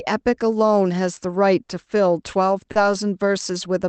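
At 2.71 to 2.78 s one sound in the speech hangs about 40 ms too long, slightly buzzy, then resumes with nothing skipped. It is a short stall from a late packet: the jitter buffer emptied, so the receiver stretched the last audio until it arrived.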